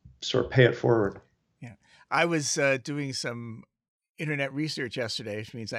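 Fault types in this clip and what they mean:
Nothing stood out on listening to this speech recording.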